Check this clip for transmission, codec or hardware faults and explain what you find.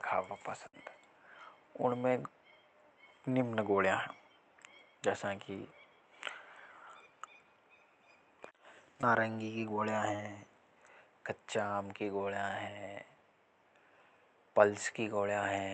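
Yes, there are transmission faults. Three packet-loss events occur in this speech clip. The call itself runs through an Opus call path, with the top end stopping near 8 kHz.

From 0.67 to 0.75 s there is a burst of packet loss. Several packets in a row were lost or arrived too late to play. The receiver held the last sound for about 58 ms and faded it down. The speech then resumes further on, with about 60 ms missing.

Short concealed packet loss occurs twice. The first is at 9.01 to 9.04 s, just before "नारंगी की". The second is at 10.16 to 10.20 s. Each time, a packet missed the decoder. It continued the previous sound briefly, for 12 ms and 19 ms, then blended back. Each sounds like a quick smear, with about 20 ms lost.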